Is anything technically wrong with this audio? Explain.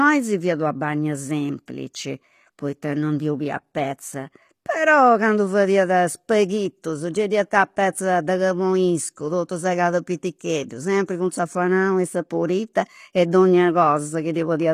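Yes. All the way through, the speech has what sounds like HE-AAC compression, likely at a low rate near 24 kbps. The treble above the core band is rebuilt from copied lower bands rather than coded, so the s sounds come out gritty and lispy, with nothing above 15 kHz.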